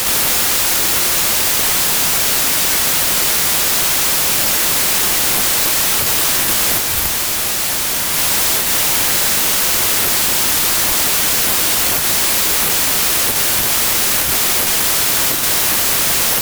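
Wrong sample width runs throughout this speech clip: audio written as 32-bit integers is read as packed 24-bit, so most samples are built from misaligned bytes, giving loud noise with the speech buried inside, playing at 0.75 speed and lower pitch.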